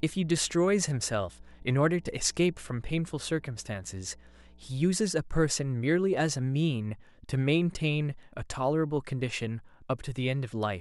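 Speech clip with mains hum, a steady 60 Hz drone roughly 25 dB under the voice from the start to 4.95 s, probably a ground loop or nearby transformer.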